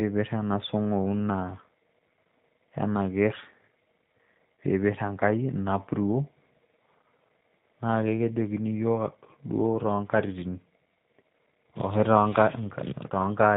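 Throughout, the speech carries G.729 codec damage. Nothing above 4 kHz survives, and the voice sounds rough and synthetic, which fits an 8 kbit/s model-based coder.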